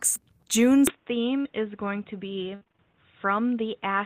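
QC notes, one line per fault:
0.87–4.06 s, input switched to a poorer device: from 0.87 s to the end the sound turns dull and boxy, with nothing above 3.8 kHz, a drop of about 5 dB and a new noise floor about 40 dB down, with no silence at the switch. This is likely a change to a narrower-band input. Unlike packet loss, the change persists.
1.41–1.47 s, short concealed packet loss: a single brief smear where about 40 ms of audio never arrived and was patched by stretching the preceding sound for about 36 ms before blending back into the real signal. It is one isolated wobble, unlike the choppy, repeated patching heard later.
2.55–2.80 s, repeated packet loss (robotic sound): for about a quarter of a second the audio turns choppy, with pieces missing. The sound points to about five separate gaps, the longest 60 ms, each filled by continuing the last sound, so 61% of the span is concealed. 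The repetition sets it apart from the single smear at 1.41 s.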